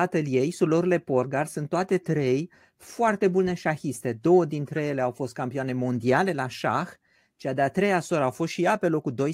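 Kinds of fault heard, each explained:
No faults detected on listening: no dropouts, clicks, clipping, pitch or timing errors, or added noise in the speech.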